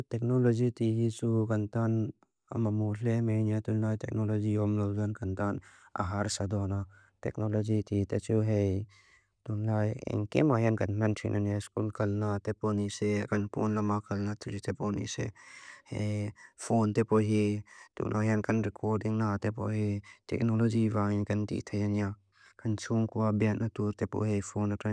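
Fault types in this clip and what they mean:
No technical faults detected.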